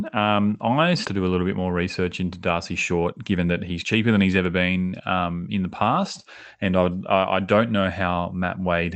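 At 1.05 s there's a skip ahead: roughly 0.7 s of speech got dropped while later audio was already queued, so playback jumps straight to "to do a little" with no gap filling the join, and the cut sounds abrupt.

From 2.91 to 5.41 s you get a jitter buffer speed-up. The buffer was holding more than its target, so it kept trimming short pitch-period chunks, about 0.3 s in total. That pushes delivery to about 113% speed at unchanged pitch, clearly hurried until "in the past and". Throughout, the Opus call path tops out around 8 kHz.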